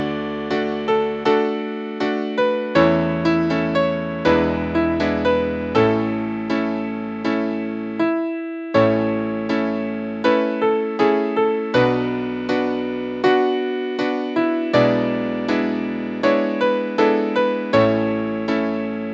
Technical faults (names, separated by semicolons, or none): none